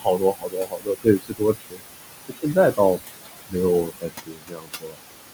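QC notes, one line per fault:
Throughout: noise suppressor artifacts. The suppressor pulls the background down by about 19 dB wherever it decides the sound is steady noise, so the room tone dips in the gaps and comes back up under the speech.
0.00–1.84 s, 2.28–2.79 s, 3.85–5.03 s: speech cut by the noise suppressor. Here it mistook parts of the speech for noise and turned them down with the background, by up to about 22 dB, so consonants and word tails sound swallowed. Roughly a second and a half goes in the first stretch, a fifth of a second in the second and about a second in the last. The room noise, sitting about 9 dB under the speech, is what the suppressor is fighting.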